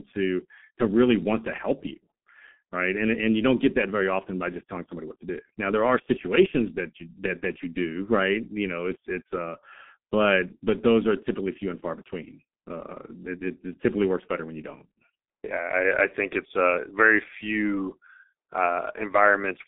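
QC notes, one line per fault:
Throughout, G.723.1 codec: heavy low-rate coding damage. Nothing passes above 3.8 kHz, and the line band runs 200 Hz to 3.6 kHz, so speech is muffled. The slow-updating voice model blurs consonants and adds hoarseness, which fits roughly 6.3 kbit/s.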